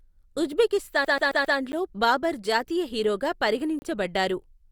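At 1.05 s the speech gets stuck like a CD on one turn of the disc: a 134 ms slice plays four times through 1.58 s, with a tiny mute at every jump. That even, quick stutter is the laser falling back one track each revolution.

Then come two blocks of digital silence, where samples dropped to zero, a 10 ms tick at 1.72 s and a 30 ms hole from 3.79 to 3.82 s. Both cut in and out with no fade, which points to the output buffer not being filled in time.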